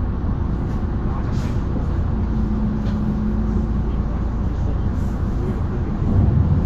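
From start to finish the treble is hissy and grainy. Attacks sound blurred and tones roughened. Nothing survives above 14.2 kHz. This is likely Vorbis compression at a low setting, roughly 34 kbps. Coarsely quantised high-frequency detail turns into noise of similar energy.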